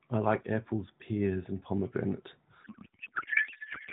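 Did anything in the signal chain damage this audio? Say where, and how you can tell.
Yes, at the codec stage: a codec payload misread from 2.64 s to the end turns the AMR narrowband speech into garbled warble, smeared noise-like energy below 4 kHz, consistent with octet-aligned frames unpacked as bandwidth-efficient.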